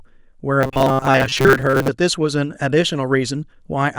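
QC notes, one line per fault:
0.61–1.88 s: robotic sound from repeated short buffers. The speech becomes a fixed metallic buzz at 133 Hz, likely from a segment of about 7.5 ms being looped while most real audio was skipped. The waveform shows identical repeating cycles, and the spectrogram shows a flat harmonic comb.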